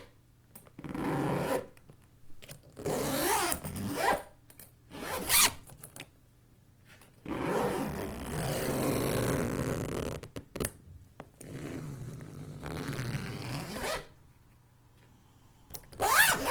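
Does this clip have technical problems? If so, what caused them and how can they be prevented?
Yes. At 4.54 s the audio switches abruptly, with no gap, to an adaptive stream at a lower bitrate and stays there to the end. Codec artefacts rise sharply, consistent with a step from around 64 to 16 kbit/s Opus after the connection slowed. Prevention: secure steadier bandwidth or a larger playback buffer, or set a higher minimum bitrate in the player.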